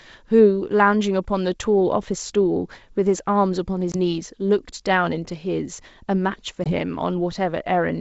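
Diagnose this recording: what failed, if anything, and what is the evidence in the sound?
Network stage: packet loss on an ADPCM call. The speech, carried as clear wideband G.722 with a light upper-band hiss, drops into hard-edged silence at 3.92 to 3.96 s and again at 6.64 to 6.73 s. Each hole sounds like about one lost 20 ms packet. When the speech returns, it is slightly distorted. ADPCM sends only differences, so the decoder's predictor and step size lose track of the sender's. They take some tens of milliseconds to settle.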